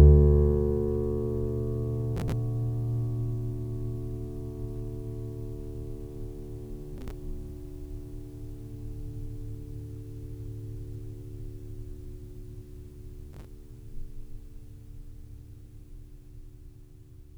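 A music recording with three short bursts of processor overload crackle, at 2.17 to 2.33 s, 6.98 to 7.11 s and 13.33 to 13.45 s. In each burst, a few dozen tiny audio buffers of around 5 ms miss their deadline in a row and are skipped, leaving a rapid run of hard-edged gaps. Unlike a single dropout or clipping on loud peaks, this gritty tearing clusters in brief episodes regardless of level, then stops cleanly.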